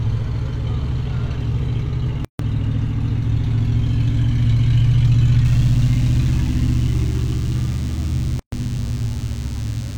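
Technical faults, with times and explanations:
2.25–2.39 s and 8.39–8.52 s, gap at a join of encoded pieces: the sound drops out abruptly for about 147 ms and then 130 ms, with slightly softened edges, and resumes exactly where it left off. The two gaps fall 6 s apart, marking joins where separately encoded pieces were butted together untrimmed. Each piece keeps the encoder's leading delay and its padded final frame, so silence sits between them, smeared a little by the codec.
5.45 s to the end, DECT cordless phone buzz: a thin, steady, harmonically rich buzz at 100 Hz sits well below the main sound. A nearby DECT handset or base transmits a short radio burst every 10 ms. The audio circuitry rectifies those bursts into the signal path, so the repetition rate is heard as a fundamental at 100 Hz with a long row of harmonics above it.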